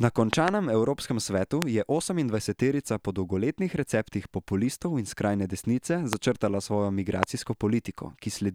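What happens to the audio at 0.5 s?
A loud pop, two of them, strikes between 0.33 and 0.50 s, roughly 25 dB above the speech, likely a voltage pulse; unlike a dropout, the speech continues underneath.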